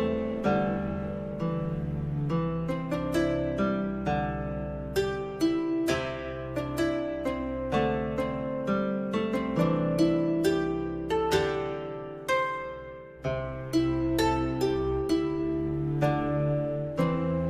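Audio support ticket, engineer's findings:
Nothing stood out on listening; no symptom found to attribute to any component.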